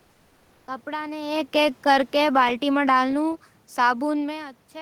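From the start to 0.67 s the background is a steady, featureless hiss, about 2 dB quieter than the real room noise that follows and lacking its texture, sitting about 39 dB below the loudest sound. This is comfort noise in place of the background. The sender likely stopped transmitting during the pause under discontinuous transmission, as in Opus DTX, so the receiver generated synthetic noise shaped roughly like the room until real audio resumed.

From 1.21 s to 4.35 s the speech and its room noise sink together, steadily, by about 7 dB in all. This is automatic gain falling. The gain control judged the input too loud or its background noise too strong and lowered its gain gradually rather than at once, so the background drops along with the speech, unlike the level shifts near 1 s and 4 s where the talker moved relative to the microphone.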